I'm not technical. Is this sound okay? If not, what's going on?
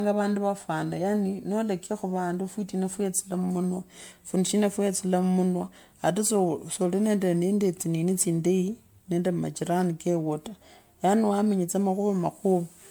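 No. The speech has generation loss throughout: it sounds swirly, hollow and smeared, and the starts of sounds are blurred. The likely cause is the recording being saved in a compressed format like MP3 around seven times over, with each pass adding more damage.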